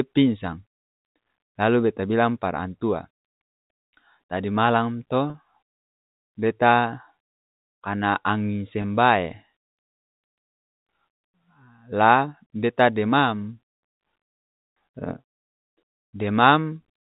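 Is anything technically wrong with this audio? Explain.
Yes. There are two brief episodes of packet loss with pitch repetition, at 5.30 to 5.34 s (40 ms, consistent with two lost packets) and at 8.82 to 8.84 s (20 ms, about one packet). In each gap the receiver filled the missing stretch by looping the last pitch period, so instead of a hole you hear a short, slightly held, buzzy sustain before the speech resumes. A plain dropout would leave silence or a click. The narrowband, telephone-like tone comes from the G.711 coding.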